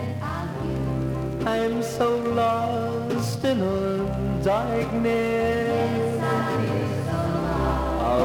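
The audio was likely mixed in twice, either captured a second time through a slower path or held as two misaligned copies by an edit. From 6.23 s to the end, this doubled audio track adds a full-band copy trailing the original by about 150 ms at about the same loudness. The copy has no decay or room colour, so it sounds like a crisp, dry repeat rather than an echo. It begins abruptly at 6.23 s.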